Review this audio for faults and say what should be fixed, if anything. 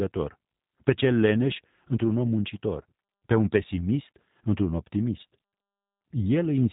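G.729 codec damage runs through the whole clip. Nothing above 4 kHz survives, and the speech has a plainly rough, synthetic edge because each 10 ms frame is rebuilt from a vocal tract filter, a pitch predictor and a few pulses. That points to an 8 kbit/s stream. Simple telephone-band filtering would sound muffled but clean, so the added roughness marks a model-based codec. To prevent it, carry the call over a wideband or higher-bitrate codec instead of G.729.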